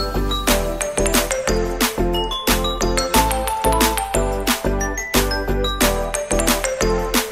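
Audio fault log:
No audible faults are present in the audio.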